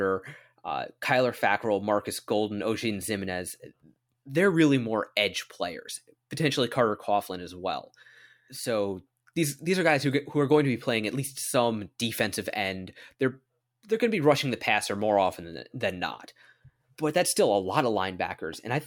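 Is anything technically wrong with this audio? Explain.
No, nothing technically wrong can be heard anywhere in this speech recording.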